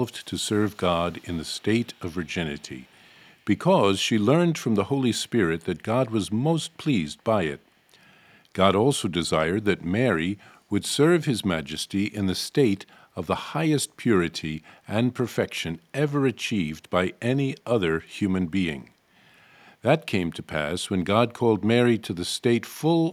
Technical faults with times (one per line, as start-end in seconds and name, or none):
0.24-3.31 echo leak